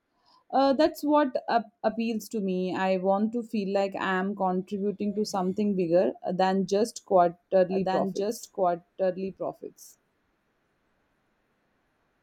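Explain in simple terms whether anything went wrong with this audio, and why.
From about 7.7 s to the end, the speech suddenly gets a second copy of itself laid on top, running about a second and a half behind and only a little quieter than the original. It sounds like someone repeating everything in a flat, clean voice with no room sound. This is a doubled audio track. The likely cause is that the same recording was picked up twice, once through a slower route, and both were mixed together out of step.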